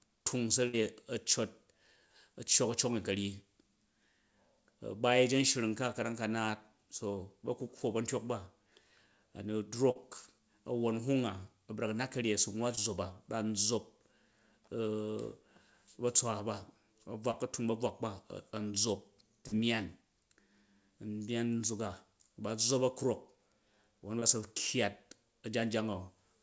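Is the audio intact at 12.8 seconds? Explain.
No, there's a short concealed packet loss from 12.75 to 12.79 s: about 20 ms of audio went missing, and the receiver patched it by stretching the previous sound, leaving a brief smear.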